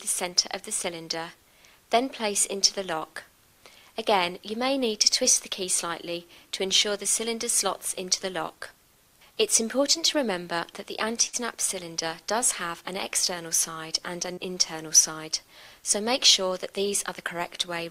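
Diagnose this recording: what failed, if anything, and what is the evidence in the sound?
Short concealed packet loss at the network stage occurs at 9.93–9.97 s and 14.33–14.39 s, leaving about 20 ms and 40 ms missing. The receiver extended the preceding sound and crossfaded back, producing a brief smear. A spectrogram shows a frozen, overly regular patch.

A burst of packet loss, also at the network stage, occurs at 11.27–11.35 s, with about 60 ms missing and 63 ms concealed. The decoder held the last sound as a steady continuation, turned it down, then resumed further along. A spectrogram shows a static band fading out before an abrupt restart, and the waveform shows a decaying envelope.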